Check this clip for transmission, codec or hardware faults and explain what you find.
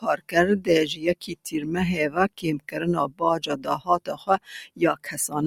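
The clip has two processing faults, both from a speech noise suppressor working on non-speech sound.

Noise suppressor applied to music or sounds, throughout: the suppressor treats steady and sustained material as noise, so its gain keeps swinging by around 10 dB. Attacks pass while held portions and tails are pulled down, giving a pumping, thinned sound.

Sound cut by the noise suppressor, at 0.0–0.35 s, 1.22–1.62 s, 3.59–4.48 s and 4.69–5.1 s: here the suppressor clamps harder, with drops of about 12, 13, 12 and 12 dB. Steady or decaying parts sink or get cut short, while sudden onsets largely survive.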